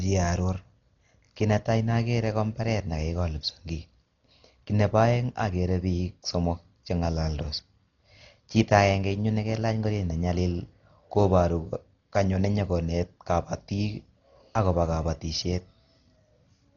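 Throughout, likely heavy Dolby Digital compression, at a bitrate fitting about 32 kbps, removes everything above 7 kHz, leaving the speech dull with rough, fluttering noise.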